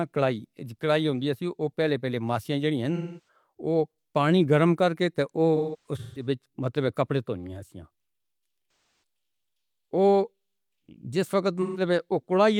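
Speech, with four patches of AAC frame loss with concealment, at 2.95–3.28 s (just before "وہ پانی گرم کر"), 5.56–6.26 s (right after "پانی گرم کر کے"), 8.68–9.02 s and 11.62–11.81 s. The decoder papers over missing frames by reusing the last good spectrum, so each gap comes out smeared and a bit noisy rather than silent. The first and third lose about 0.3 s of audio, the last about 0.13 s, and the second is broken up over about 0.6 s, its longest run roughly 150 ms.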